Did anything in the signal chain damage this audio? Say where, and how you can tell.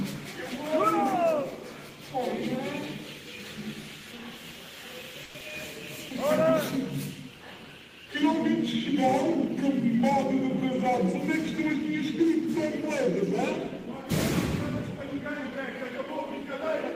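Yes. From 5.23 to 5.44 s the network stage shows what is likely a long network dropout. The last sound is stretched into a fading buzz for about 180 ms, and roughly 60 ms of audio never returns, so the signal resumes further along with no gap of true silence. On a spectrogram the energy smears into blurred, decaying horizontal bands before the content jumps forward. The receiver's playout delay appears to shift by around 70 ms.

Right after, from 6.06 to 6.98 s, the jitter buffer slow-down is audible. The receiver, refilling its reserve, repeats single pitch periods many times, adding 47 ms so the audio plays at 96% speed with unchanged pitch. Sounds are drawn out slightly. On the waveform, identical adjacent cycles repeat back to back. A spectrogram shows harmonics held at the same frequency but stretched along the time axis.

From 14.98 to 16.41 s the same buffer does the opposite, a jitter buffer speed-up. 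Holding more audio than its target, it removes short pieces of one or a few pitch periods in succession, about 50 ms in total, so the audio runs at 103% speed at the same pitch. The waveform shows periodic cycles dropped at splice points. The spectrogram keeps its harmonic spacing while events arrive compressed in time.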